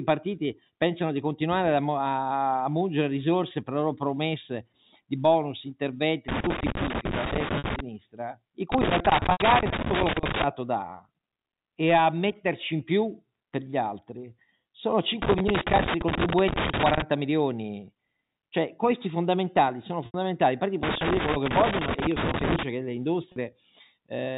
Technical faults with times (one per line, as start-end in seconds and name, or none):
6.28-7.80 loose connector crackle
7.58-7.64 packet loss with pitch repetition
8.72-10.44 loose connector crackle
9.32-9.40 packet loss with pitch repetition
15.22-17.02 loose connector crackle
20.06-20.14 packet loss with pitch repetition
20.83-22.63 loose connector crackle
23.32-23.36 packet loss with pitch repetition